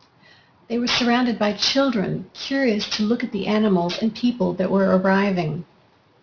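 Aliasing runs the whole clip: it sounds like a drop to 11 kHz with no filtering, so sibilants fold back below 5.5 kHz as gritty, metallic hash, only about 10 dB down.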